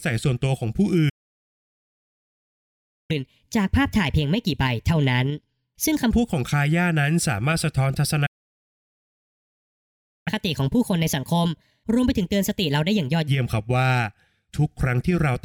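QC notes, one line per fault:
1.09–3.11 s, playback stall: The player most likely ran short of data or had its output thread blocked, so nothing reached the output for 2 seconds. The speech cuts off in mid-flow and leaves dead silence until playback recovers.
3.11–6.11 s, catch-up at higher speed: To win back the lost time, the player resamples its backlog at 1.25 times normal speed. For 3 seconds the speech runs noticeably quicker and rises about four semitones in pitch, then drops back to normal.
8.26–10.28 s, playback stall: A second interruption, again likely a data shortfall or a blocked playback thread, halts the output for 2 seconds. The speech stops abruptly and the gap is complete silence until the stream resumes.
10.28–13.28 s, catch-up at higher speed: The backlog is again played out through resampling at 1.25 times speed. For 3 seconds the speech sounds hurried and pitched up by roughly four semitones before returning to its normal rate.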